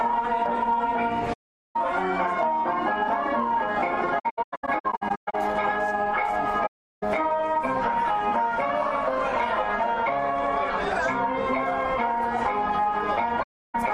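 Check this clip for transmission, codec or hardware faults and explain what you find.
There are four gaps from AAC frame loss with muting: 1.33–1.76 s, 4.19–5.35 s (scattered dropouts, longest about 150 ms), 6.66–7.03 s and 13.42–13.75 s. Lost frames decode as silence, and window overlap fades the edges, giving soft holes. A spectrogram shows full-band blank columns and the waveform shows tapered flat stretches.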